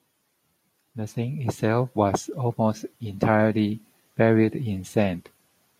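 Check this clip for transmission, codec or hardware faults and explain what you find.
There's one fault here, an automatic gain rising, in this speech clip. From 0.94 s to 3.33 s the level climbs by about 6 dB, smoothly rather than in a step. The gain control has decided the input is too quiet and is turning itself up over a couple of seconds. Because it's adjusting the whole signal, the background lifts right along with the voice, so the room noise swells up behind the speech.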